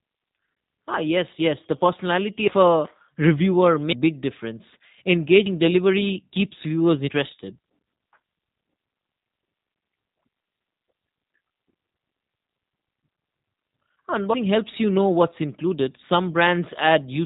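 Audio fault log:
Throughout: G.729 codec. The speech sounds slightly rough and synthetic, with a buzzy, thin edge, and nothing above about 3.8 kHz reaches the ear, so consonants lack their crisp top end. The coding damage is plainly audible. It comes from a low-rate VoIP codec, here the 8 kbit/s G.729A variant, which does not carry the waveform itself but rebuilds each short frame from a vocal tract filter, a pitch predictor and a few pulses.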